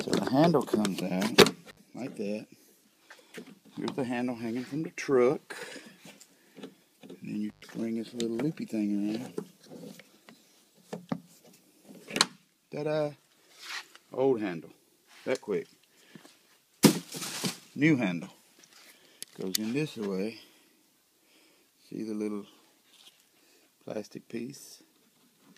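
A loose cable or plug briefly lost contact twice, an intermittent contact fault. At 1.69 to 1.79 s the line opened for 59 ms, and at 7.50 to 7.64 s for 105 ms. Each time the sound drops out abruptly, with crackle marking the break and the return.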